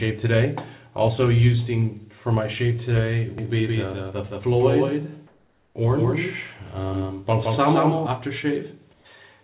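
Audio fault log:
3.38–8.06 s, doubled audio track: a full-band copy trails by about 150 ms, about 5 dB down, and starts and stops abruptly. This is likely two out-of-step copies, unlike an echo, which decays and carries room colour.
5.27–5.75 s and 8.93–9.05 s, comfort noise in place of the background: the background turns steady and featureless for 480 ms, then 120 ms, about 3 dB and 4 dB quieter. This is likely discontinuous transmission, not a dropout, because sound never goes silent.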